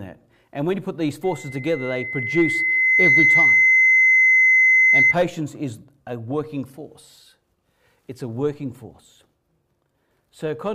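From 1.23 s to 5.15 s a loudspeaker feedback squeal takes over. A microphone is hearing its own loudspeaker, and at 2.1 kHz the loop gain tops unity, so that tone feeds itself, swelling over roughly two seconds into a piercing whistle about 10 dB above the sound. On a spectrogram it is a single bright horizontal line at 2.1 kHz that thickens and brightens, then stops; the waveform envelope swells correspondingly.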